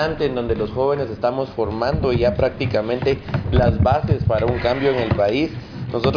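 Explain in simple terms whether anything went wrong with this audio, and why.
Nothing went wrong here: listening all the way through, there's no glitch, dropout or odd noise to point to.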